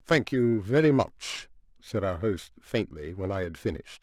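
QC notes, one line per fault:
Throughout, periodic clock jitter: the speech carries a rough, metallic edge that is strongest on bright, high-pitched sounds and drops away in pauses. Interference wobbles the converter's clock at around 2 kHz, adding sidebands at that spacing beside every component.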